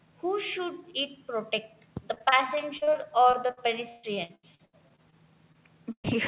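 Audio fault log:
2.14–5.14 s, repeated packet loss (robotic sound): about 20 gaps across three seconds, the longest 144 ms, roughly a quarter of the stretch filled in by extending the preceding sound. Missing pieces arrive so close together that the speech turns choppy.
5.52 s, short concealed packet loss: about 20 ms never arrived and was bridged by continuing the previous sound before blending back into the real signal. It registers as a brief smear or wobble in the speech rather than an audible gap.
5.92–6.06 s, burst of packet loss: roughly 120 ms dropped in a row. The receiver held the last sound and faded it, so a short buzz or hiss decays into about 80 ms of silence before the speech resumes with that stretch absent.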